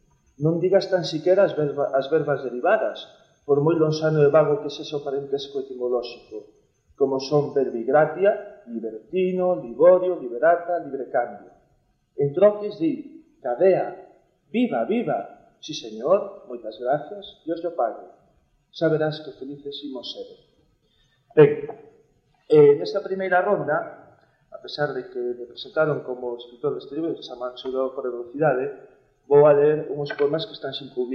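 No audible technical faults anywhere in this recording.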